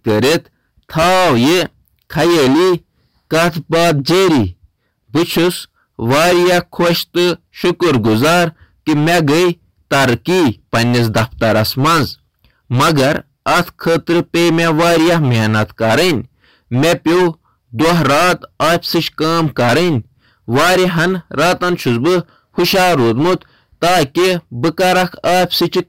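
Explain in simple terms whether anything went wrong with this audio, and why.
Hard clipping runs through the whole recording, from start to finish. The speech was pushed far louder than the recording stage could handle, so every loud moment hit a ceiling and had its peaks sliced off flat. This happens so often that the sound is being cut for roughly a third of its length. Those flattened peaks add a harsh, buzzing fuzz on top of the voice.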